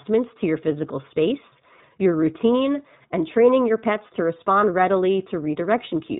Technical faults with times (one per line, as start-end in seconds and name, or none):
0.00-6.19 iLBC codec